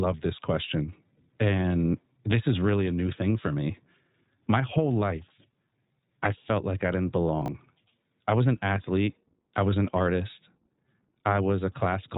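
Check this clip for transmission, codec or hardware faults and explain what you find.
Two faults are present: the whole clip carries plainly audible iLBC codec damage, and a brief passage has chunks out of order.

Throughout, the speech has the iLBC codec's narrowband, slightly rough, synthetic quality. Each short frame's excitation is coded independently, which fits 20 ms frames at the codec's 15.2 kbps mode. A spectrogram shows energy ending sharply at 4 kHz, with nothing above it.

From 7.42 to 7.48 s, chunks out of order garble the sound. A 20 ms chunk was written late, which points to it landing about two chunks after its proper place. The waveform shows three abrupt discontinuities where the misordered segments join.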